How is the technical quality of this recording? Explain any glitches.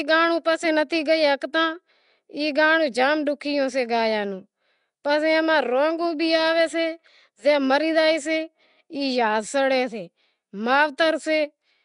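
The technical quality is poor, with codec damage present from start to finish. Throughout, the speech has a rough, hissy halo and a smeared, underwater quality, with nothing above 10.6 kHz. This is likely Nellymoser compression, consistent with about 44 kbps. Each short block gets a fixed, small bit budget. Weak bands receive none and are filled with noise, which causes the hiss and smearing.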